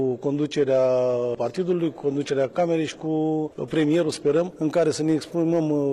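From the start until 4.43 s the audio sounds dull and swirly, with treble that seems thin or artificial, and nothing above about 12.3 kHz. At 4.43 s it turns clear and full without any gap. This is an adaptive stream starting at a low bitrate. The player opened on a low-quality version, fitting something like 16 kbit/s HE-AAC, to begin playing quickly. Once it had gauged the connection it switched to a better one, likely around 96 kbit/s AAC-LC.

Running through the whole clip, the loudest moments carry a brief crackle on their peaks. That is hard clipping. The signal was driven about 3 dB past what the chain could pass, so the tops of the biggest waveform peaks were sliced flat. Those flat edges generate harmonics high in the spectrum. Because only a small fraction of samples, under one percent, exceed the limit, the damage shows as crackle on peaks rather than continuous fuzz.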